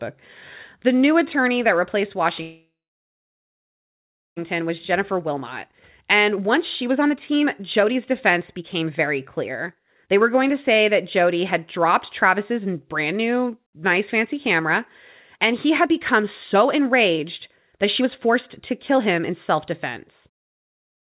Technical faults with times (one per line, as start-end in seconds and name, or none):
2.42-4.38 call audio freeze
4.60-10.50 jitter buffer speed-up
12.28-14.60 jitter buffer speed-up
15.37-17.26 jitter buffer speed-up
17.78-19.56 jitter buffer speed-up